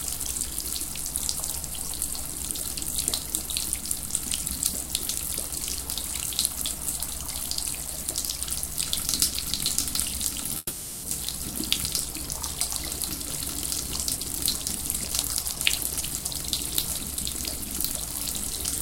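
A recording of everyday sounds with a call audio freeze from 10.57 to 11.05 s. For about 460 ms the sound stops progressing and the last fragment is drawn out as a decaying buzz, ending in a brief silence of about 20 ms before the audio resumes where it left off. Nothing is skipped; the playout simply falls about 460 ms behind. This pattern is most likely packets held up in transit while the jitter buffer ran dry and the receiver concealed the gap. A jitter buffer speed-up follows from 14.16 to 18.07 s. The sound plays at about 112% of normal speed with pitch unchanged, so events come hurried and closer together. This happens because the receiver trims short pitch-period-length pieces repeatedly to shrink the excess buffered delay, removing roughly half a second in total.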